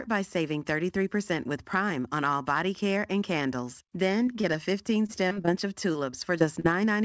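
Short concealed packet loss hits at 4.26, 4.41 and 4.53 s. About 20 ms is lost each time. The receiver extends the last sound, leaving brief smears or wobbles. Repeated packet loss (robotic sound) follows from 5.06 to 5.49 s and from 5.93 to 6.66 s. Gaps recur, each patched over, so the speech turns choppy. The call path caps everything at 8 kHz, which fits a G.722 codec.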